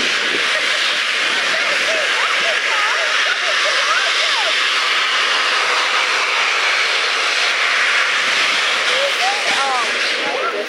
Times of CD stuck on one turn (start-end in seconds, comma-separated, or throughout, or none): none